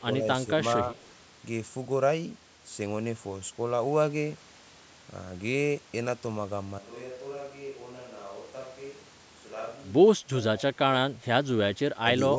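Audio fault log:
0.97–1.07 s, echo leak: a faint copy of the speech returns 146 ms late, about 35 dB down. Likely a loudspeaker echo the far canceller missed.
10.16–10.34 s, 10.59–10.79 s, 11.08–11.22 s, 11.97–12.38 s, speech suppressed in double talk: the speech dips by roughly 10 to 20 dB in short pieces. Likely the canceller ducking both talkers.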